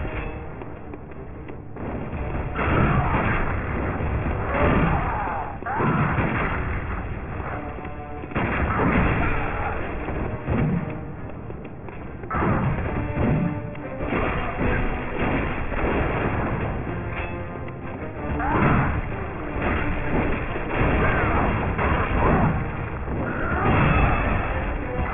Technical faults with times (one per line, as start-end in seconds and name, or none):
0.00-25.14 aliasing